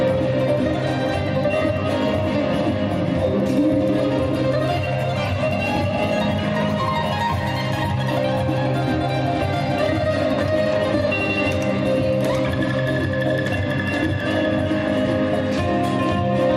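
From 7.15 to 7.65 s an unreliable data bit flips at random, adding equal spikes of about -34 dBFS heard as a steady crackling fizz.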